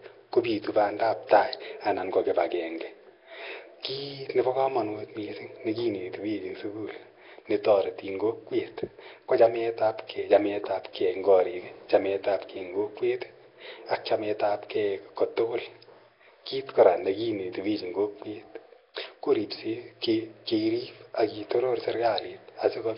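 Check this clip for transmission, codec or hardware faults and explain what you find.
A codec fault runs through the whole clip, and Nellymoser compression is the likely culprit. The speech sounds heavily damaged, hissy and smeared, with nothing above 5.3 kHz. That fits starved bands being filled with noise at around 22 kbps.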